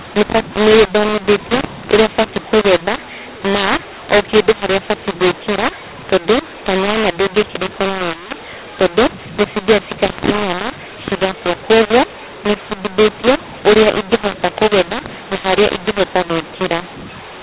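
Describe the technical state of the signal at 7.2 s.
At 7.2 s, as across the whole clip, mu-law telephone samples are being decoded as A-law. This mu-law and A-law mix-up scrambles levels, so the speech sounds harsh and distorted, with noise filling pauses.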